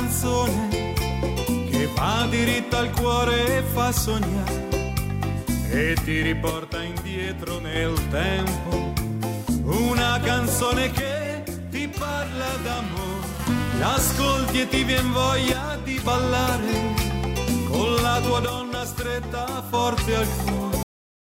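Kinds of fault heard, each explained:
One channel drops out: at 6.5–7.8, 11.0–13.4, 15.5–16.1 and 18.5–19.7 s the level abruptly dips about 6 dB, likely from losing one stereo side before mono summing.
Cut-off end: at 20.83 s the audio stops mid-sound into digital silence with no decay, because the final buffers were never written out.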